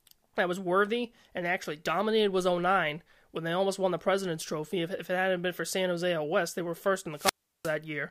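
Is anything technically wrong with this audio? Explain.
Yes. From 7.14 to 7.76 s, just after "they were first", there is a wireless microphone squelch dropout. The analogue FM link between transmitter and receiver weakened so far that the receiver's squelch gate shut off the output rather than pass raw radio noise. The speech gives way to a short surge of hiss, then about 0.36 s of near silence, and the speech comes back as the signal recovers.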